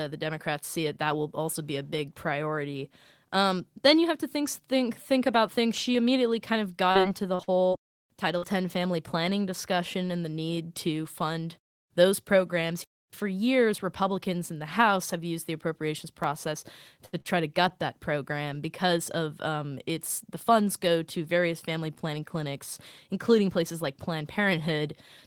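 At 6.91 s, just after "immediately kind of", a short concealed packet loss patches about 40 ms of missing speech with continued sound, heard as a brief smear, not a held sound. From 7.35 to 7.91 s, repeated packet loss leaves four gaps, the longest 44 ms, each patched in turn. The result is choppy, robotic speech rather than one isolated smear. Another short concealed loss of 40 ms smears 8.38 s. At 16.24 s, after "have used the appropriations", a single sharp click is heard, likely dropped samples: a fraction of a millisecond jumps away, too brief to remove any sound. At 17.06 and 17.21 s, short stalls from late packets stretch the sound by 68 ms and 44 ms while the stream waits. Sound is held too long but nothing is missing, which sets them apart from concealed loss.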